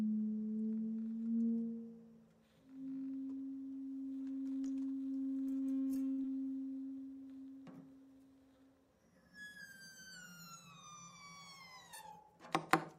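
At 6.11 s the sound holds still for a moment. This is a short stall from a late packet. A packet was late, and the jitter buffer ran dry. The receiver stretched the last bit of sound to cover the gap, about 67 ms, until the packet turned up. Playback then picked up exactly where it left off. Nothing is lost. The audio simply hangs a little too long, ending at 6.20 s, with a faint buzz or dip.

Right after, from 6.22 to 6.26 s, comes a short concealed packet loss. About 40 ms of audio never reached the decoder in time. The receiver filled only about 15 ms by extending the preceding sound, then blended back into real audio. The rest was dropped, pulling the delay back down by a few tens of milliseconds. It is heard as a quick smear or wobble, and a brief sound here can disappear outright.

From 12.11 to 12.40 s there is a jitter buffer speed-up. The buffer was holding more audio than it wanted, so the receiver trimmed out small pitch-length slices, one after another. 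Roughly 40 ms was removed in all. Playback runs at about 110% speed while the pitch stays the same. The result is a brief hurried feel to the timing near the end of the clip.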